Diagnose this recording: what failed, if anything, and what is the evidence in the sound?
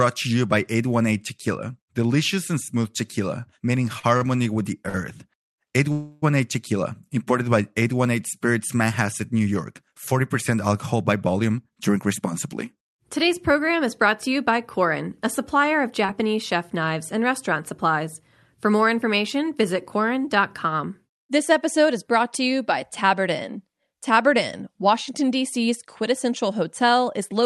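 Repeated stalls (stutter), 3.99 to 4.96 s, right after "and smooth tequila meaning": the network and jitter buffer stage failed. Packets arrived slower than playout, so the buffer emptied four times. Each time the receiver stretched the last sound to bridge the wait, the longest bridge being 51 ms, about 137 ms in all, roughly 14% of that stretch. Nothing is lost, but the speech drags and hiccups through the span.

Call audio freeze, 5.92 to 6.24 s: the sound hangs for 303 ms as the receiver continues the last fragment as a fading buzz without dropping to silence, then resumes exactly where it stopped. No audio is missing. Instead a 303 ms gap is inserted, pushing everything after it later by that amount. The likely cause is a burst of packets held up in the network, which drained the jitter buffer completely.

Jitter buffer speed-up, 11.44 to 17.98 s, beginning just after "alcohol by": the buffer had accumulated more audio than its target, so the receiver trimmed short pitch-period slices repeatedly to shed the excess, around a third of a second in total. 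Playback runs at about 105% speed with pitch unchanged, so the speech sounds slightly hurried across those six and a half seconds.

Short concealed packet loss, 16.06 to 16.10 s, inside the sped-up stretch: 20 ms of the stream never reached the decoder in time. The receiver synthesised 21 ms from the preceding sound and blended it back into the real signal, leaving a brief smear or wobble where that fragment should be. This is a network-stage fault hidden by concealment in the receiver, not a codec error. The Opus path itself carries its usual coding noise with content up to about 12 kHz.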